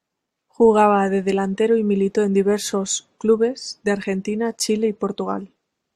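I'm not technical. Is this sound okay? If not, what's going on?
Yes, nothing in this speech recording points to a technical problem with the signal.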